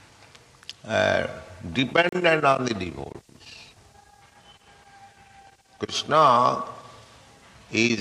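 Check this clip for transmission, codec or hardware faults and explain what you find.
Two faults of one kind. A block of digital silence at 2.09 to 2.13 s (about 35 ms) and 3.12 to 3.15 s (about 23 ms, fitting a 1024-sample buffer) drops the sound abruptly to silence, each heard as a short hole.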